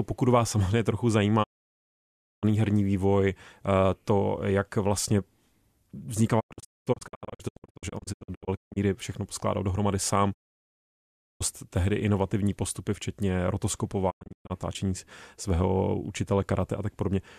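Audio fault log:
1.42–2.45 s, 6.39–8.78 s, 10.33–11.42 s, 14.09–14.52 s: digital broadcast dropout. The receiver mutes failed frames, fading out within 20 ms. The second and fourth events break into scattered short holes, the longest about 0.22 s. Waveform and spectrogram show blank gaps with steep edges, and the speech inside them is lost.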